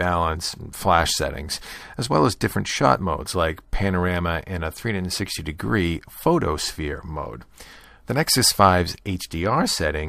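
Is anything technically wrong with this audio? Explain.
No, nothing is technically wrong with this audio.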